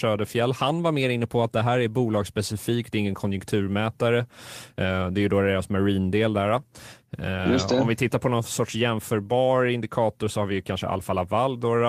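No technical faults can be heard anywhere in the speech recording; the signal stays continuous and steady throughout.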